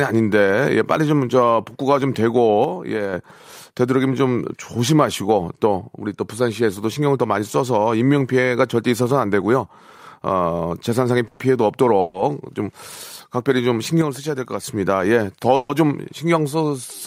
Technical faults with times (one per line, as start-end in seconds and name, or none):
2.64-3.13 one channel drops out
11.27-11.53 call audio freeze
12.00-12.16 call audio freeze
14.02-14.64 one channel drops out
15.55-15.71 call audio freeze